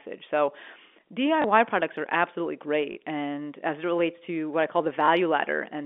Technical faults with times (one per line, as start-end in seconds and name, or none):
1.42-1.44 packet loss with last packet repeated
2.92-2.96 packet loss with last packet repeated
5.06-5.08 packet loss with last packet repeated